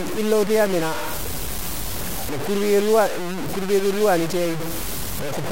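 Speech runs throughout with low bit depth without dither: the audio sounds like it has only about 4 bits, truncated rather than rounded, so the error tracks the signal as grainy distortion roughly 10 dB below it. Quiet passages sputter between steps or fall to silence, likely from a careless word-length reduction.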